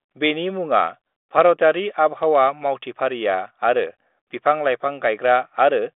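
No faults are audible; the speech sits in a telephone band of roughly 250 Hz to 3.6 kHz with nothing above 3.8 kHz, and the coding noise is faint to absent, which fits G.726 ADPCM running at 40 kbit/s.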